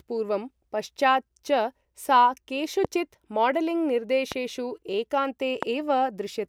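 A speech recording marred by three loud pops, at 2.85–2.87 s, 4.32–4.34 s and 5.63–5.65 s. Each is a single sharp thump peaking roughly 15 dB above the speech, likely from a voltage spike such as a switch, static or driver glitch. Unlike a dropout, the speech continues underneath each pop without any gap.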